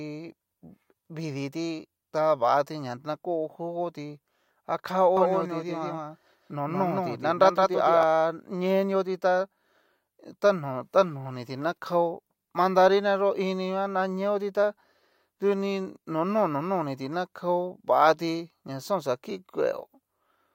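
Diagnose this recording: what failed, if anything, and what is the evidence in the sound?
Doubled audio track, 5.17 to 8.03 s: a copy about 5 dB lower trails by roughly 150 ms and starts abruptly without decay, unlike echo. It is likely a slower duplicate capture path at the driver stage.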